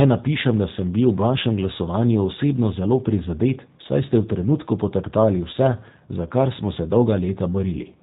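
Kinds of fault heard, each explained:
G.729 codec: the speech is squeezed through a low-rate VoIP coder, which fits 8 kbit/s, so nothing above 4 kHz survives and it sounds plainly rough and synthetic.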